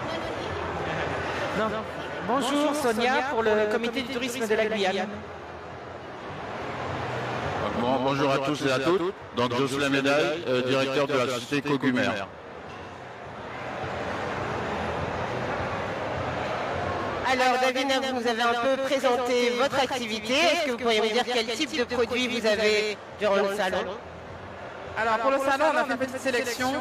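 From start to finish, every sound is followed by a second copy of itself arriving about 150 ms later and about 5 dB quieter, giving a slapback, stuttering doubling to each onset. The copy carries the full frequency range and has no decay or room colour, so it reads as a duplicate rather than an echo. This is a doubled audio track, likely from the same signal being captured a second time through a slower path and mixed back in.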